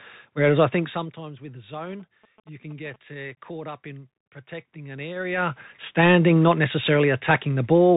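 Throughout, the speech passes through a Bluetooth CVSD headset codec, and the damage is plainly audible. The one-bit delta modulator, which fits a 64 kbps headset link, cannot follow fast, loud high content, so sibilants turn scratchy and a fine granular hiss sits under everything. On a spectrogram, energy stops abruptly near 4 kHz and a grainy noise floor fills the gaps between syllables. The waveform shows softened, slope-limited peaks.

From 1.77 to 2.96 s, just before "uh caught up in", GSM signalling bursts break through. A nearby 2G phone is exchanging short groups of radio bursts, and the audio circuitry rectifies them into a galloping dit-dit-dit of short buzzes. They repeat at about 217 Hz and sit roughly 15 dB below the speech. A spectrogram shows regularly spaced vertical stripes with a harmonic comb built on 217 Hz. The waveform shows clustered rectangular pulses riding on the speech.

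At 3.35 s, just before "caught up in protecting", there is unconcealed Bluetooth headset packet loss. A few voice packets between headset and phone never arrived, and nothing was done to hide the gap, so about 22.5 ms of sound drops out with hard edges. Because the CVSD decoder's step size has to rebuild, the speech returns briefly quieter. The waveform shows a flat gap with steep walls, and the spectrogram shows a narrow blank column.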